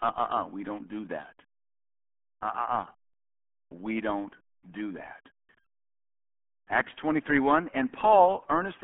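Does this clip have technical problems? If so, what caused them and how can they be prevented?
Yes. The RealAudio 14.4 codec damage runs through the whole speech clip. Nothing passes above 3.8 kHz, and the band sits roughly between 250 Hz and 3.4 kHz. Heavy coding leaves the speech muffled and gargly, which fits an 8 kbit/s dial-up codec. To prevent it, record or transcode with a modern wideband codec at a higher bitrate.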